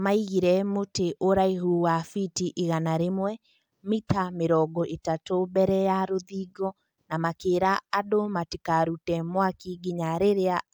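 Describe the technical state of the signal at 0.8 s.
At 0.8 s the signal is intact, with no dropout, distortion, glitch or other fault audible at that point.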